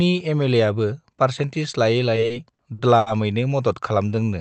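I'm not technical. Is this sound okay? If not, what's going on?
No. From 2.15 to 3.09 s there's a burst of repeated stalls (stutter): the audio arrived late six times, so the receiver stretched out the last bit of sound to cover each wait, the longest about 80 ms. Nothing is lost, but roughly a quarter of that stretch is filler, so it drags and stutters.

Then from 3.92 to 4.25 s comes a jitter buffer slow-down: the receiver repeated tiny slices of the speech to rebuild its reserve, adding about 45 ms. That part plays at 89% speed, drawn out but at the same pitch.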